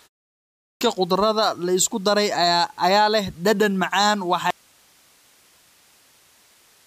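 After the opening pause of about 0.41 s, the output device had to wake and lock again before passing sound, giving a clipped start after a pause. Roughly 0.4 s of speech, from 0.41 to 0.81 s, is swallowed, so "khudradda la isku daray" begins abruptly without its first sounds.

At 4.5 s, just after "ayaa leh dhadhan macaan", the wanted signal was likely lost while the path after the break stayed live. This audio dropout to a faint residue cuts the speech off mid-flow, leaving only hiss, about 35 dB below the speech, through to the end.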